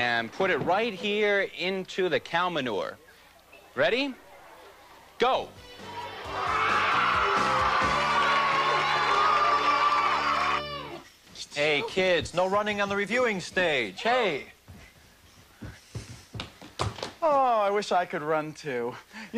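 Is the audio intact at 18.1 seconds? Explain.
Yes, at 18.1 seconds the audio runs intact, with no dropout, click, distortion or other break in the signal.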